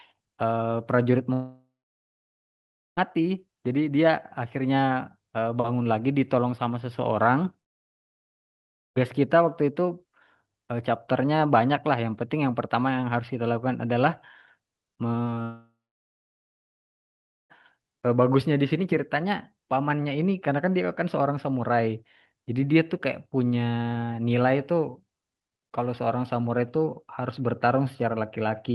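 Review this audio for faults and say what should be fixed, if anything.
Long network dropouts at 1.33–2.99 s, 7.61–8.98 s and 15.42–17.52 s, likely from stalled delivery: in the first and third the receiver briefly extends the last sound, and the three go silent for about 1.3, 1.4 and 1.8 s. Playback resumes with those stretches missing.

Short concealed packet loss at 15.24–15.29 s, 15.30–15.34 s and 15.34–15.38 s: three 20 ms gaps filled by extrapolation and cross-faded back, giving a brief smear just before the third dropout.

To prevent both, stabilise the network path and size the jitter buffer to ride out bursts, with redundancy or FEC for isolated losses.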